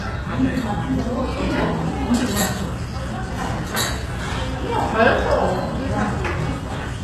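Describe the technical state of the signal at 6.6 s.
At 6.6 s the sound carries plainly audible HE-AAC compression damage, present throughout the clip. Nothing sits above 12.3 kHz, and the treble is rebuilt from copied lower bands, so it turns gritty and metallic, likely from encoding at a low bitrate around 16 kbps.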